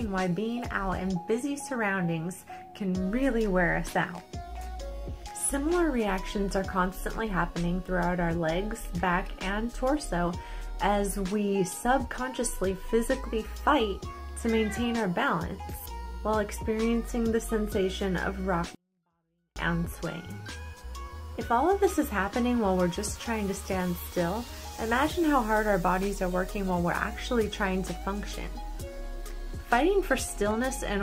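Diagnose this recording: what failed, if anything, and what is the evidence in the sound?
The failure is at the sample-format conversion stage: a 24-bit alignment error that leaves the sound far too quiet. From 18.75 s to 19.56 s the level falls by about 48 dB at once and the sound becomes almost inaudible, though it stays clean, with no added distortion or noise. On a waveform this shows as a sudden flat stretch. On a spectrogram the same time span fades to near-black and keeps its shape. The cause is 24-bit samples packed in the low bytes of 32-bit words being read as full 32-bit integers, which scales every value down by 2^8.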